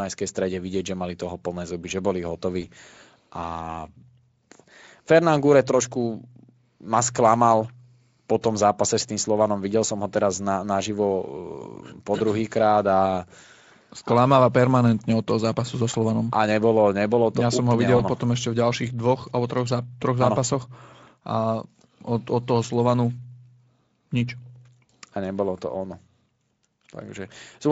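VoIP packet loss concealed by the speech codec, Speex here, occurs at 2.61 s after "plné zuby že boli", 17.97 s between "som ho videl" and "ono potom ešte", and 24.85 s. Each loss fits one, one, then two 20 ms frames. Rather than a silent dropout, the decoder fills the gap with a brief fading buzzy tone or coloured noise.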